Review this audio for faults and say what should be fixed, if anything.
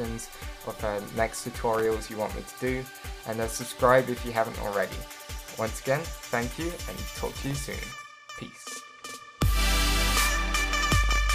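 Processor overload crackle appears from 1.74 to 1.99 s and again from 10.54 to 11.18 s. The processor repeatedly missed its deadlines for very short audio buffers, well under a millisecond each, and every miss became a brief patch of silence with abrupt edges. On the waveform this shows as a run of tiny flat gaps cut into the signal, and on a spectrogram as clustered thin vertical broadband stripes. To prevent it, reduce the processing load or enlarge the audio buffer so each block finishes on time.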